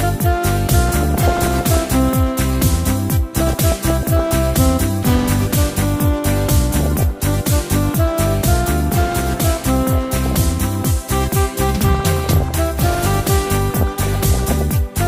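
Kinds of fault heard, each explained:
DAB burbling: Weak reception lets bit errors slip past error correction into the MP2 data. Single sub-bands get short noise blips, and wrong scale factors, where they get through, make sub-bands jump in level for up to a frame. Six bursts between 0.9 and 14.6 s each last under a second, suggesting errors near one percent.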